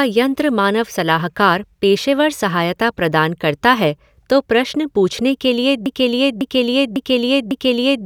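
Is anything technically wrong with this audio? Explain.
Yes. The speech falls into a broken-record loop from 5.86 s to the end of the clip. A fragment about 0.55 s long repeats exactly, back to back, four times. The audio stops moving forward, and whatever should have followed is gone. The likely cause is a player, encoder or stream that stalled and kept resending the last piece it held. It sounds like a skipping record.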